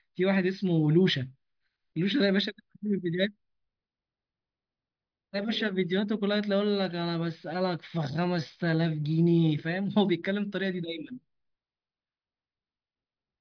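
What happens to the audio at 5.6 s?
At 5.6 s the speech carries on intact, with no dropout, click, distortion or other fault at that point.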